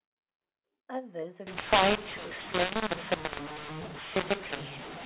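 From 1.47 s to the end of the clip, mu-law and A-law are mixed up: the speech was coded with mu-law but is being decoded with the A-law curve. Because the two logarithmic scales map each 8-bit code to different levels, sample sizes come out scrambled, some too loud and some too quiet. The telephone-band speech turns harsh and gritty, and its pauses fill with hiss instead of falling to silence.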